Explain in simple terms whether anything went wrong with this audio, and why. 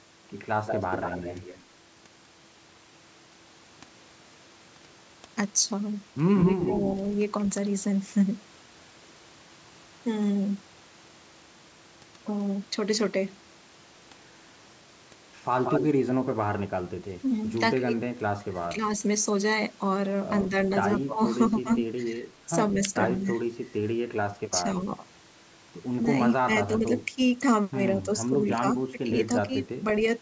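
Two problems can be heard in this speech. First, echo leak. From 0.66 to 1.64 s, 6.35 to 7.44 s and 15.64 to 15.86 s, a copy of the voice returns about a fifth of a second late, only slightly quieter. The likely cause is a loudspeaker echo the canceller missed.

Second, speech suppressed in double talk. From 17.21 to 18.81 s, 20.5 to 21.68 s, 22.74 to 23.31 s, 24.52 to 24.82 s and 26.43 to 29.84 s, the voice briefly dips or drops out. Both sides likely spoke at once, so the canceller turned everything down.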